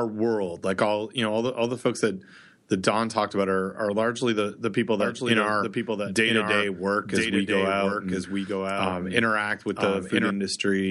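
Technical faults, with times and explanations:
5.00 to 10.30 s, doubled audio track: Just after "largely the the people", a second, full-band copy of the speech is mixed in about a second behind the original and roughly 5 dB quieter. It was likely captured again through a slower path or left as an out-of-step edit. Because the copy carries no decay or room colour, it sounds like a clean overlapping repeat rather than an echo, and it starts and stops abruptly.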